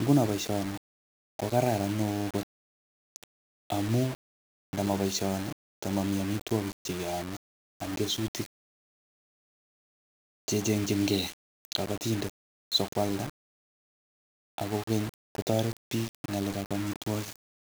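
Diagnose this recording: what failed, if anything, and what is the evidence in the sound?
The speech has a grainy, fizzy distortion from start to finish that rides along with the sound itself, getting rougher as the level drops. Quiet stretches and word tails break up into a coarse sputter or fall straight to silence. That's low bit depth without dither, most likely from a sample-format conversion that rounded down to about 5 bits. With no dither, the error tracks the signal and sits only about 15 dB below it.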